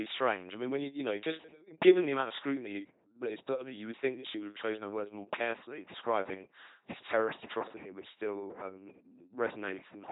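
A buzzing, mechanical robot voice runs through this speech clip from start to finish, with nothing above about 3.9 kHz. That is the signature of the LPC-10 vocoder at 2.4 kbit/s: each instant is rebuilt from a short-order filter excited by either a pulse train or noise, so voicing is all-or-nothing and the speech is heavily damaged.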